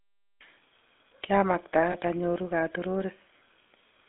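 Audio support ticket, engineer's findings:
GSM full-rate codec, whole clip: buzzy, gravelly roughness on the speech, band limited to about 150 Hz to 3.5 kHz, consistent with 13 kbps GSM full rate. Unlike plain telephone band-limiting, the grit comes from coarse pulse-train excitation driving the vocal-tract model.

Lost GSM frames at 1.92 to 1.96 s and 3.68 to 3.70 s: short rough, metallic ring instead of a gap, each fitting a single lost 20 ms frame. The decoder repeats the last good frame's parameters. Without concealment, a dropout would leave silence or a click instead.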